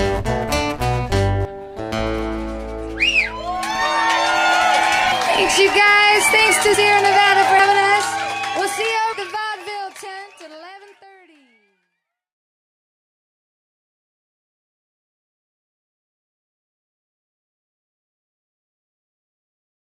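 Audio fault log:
1.45, 5.12, 6.74, 7.60, 9.13 s: dropped buffer (overrun), likely cause. Each is a jump with the sound skipping ahead roughly 100 to 300 ms.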